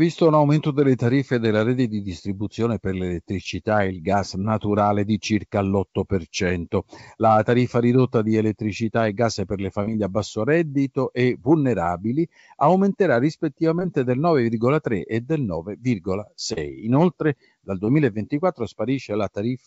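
At 9.83 to 9.87 s, between "e gas per le" and "a basso reddito e", and again at 16.53 to 16.58 s, there is short concealed packet loss. Each time, a few tens of milliseconds of the call arrived too late, and the receiver bridged the gap by extending the preceding sound before fading back into the real signal. It is heard as a brief smear or wobble rather than a hard gap of silence, which sets it apart from a plain dropout, all within the G.722 path's 8 kHz band.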